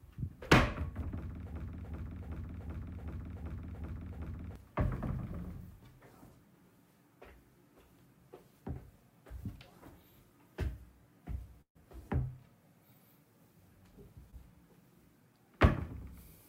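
A recording of everyday sounds with three kinds of fault. From 1.54 to 4.56 s there is a broken-record loop. A fragment about 380 ms long plays eight times, back to back, with no change. The player, encoder or stream likely stalled and kept sending the last piece it held. Whatever should have sounded during those three seconds is gone. Normal audio returns only after the repeats end. At 11.61 to 11.77 s there is a burst of packet loss. About 140 ms of audio never arrived. The receiver extended the last sound for 134 ms and faded it down, so the final 90 ms or so is silent. The sound then picks up further along, and the gap is heard as a jump. At 14.31 to 14.34 s there is a short concealed packet loss. About 20 ms went missing. The decoder filled 13 ms by carrying on the preceding sound and then blended back into the real signal. This gives a brief smear or wobble rather than a clear break.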